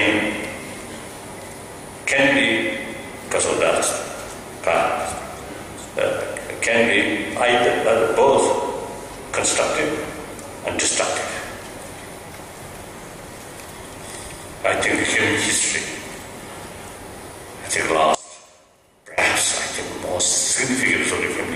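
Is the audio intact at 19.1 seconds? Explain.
No. From 18.15 to 19.18 s the sound drops by about 21 dB to a faint copy, the centred content largely gone. The likely cause is one channel inverted: with one stereo side in reversed polarity, the material both sides share cancels in the mono sum, leaving only their difference. On a waveform the envelope collapses abruptly for that span; a spectrogram shows the band darkening.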